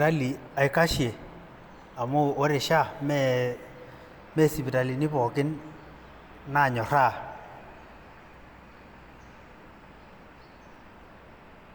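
Nothing technical stands out in this bit of speech; every moment of it sounds the way it should.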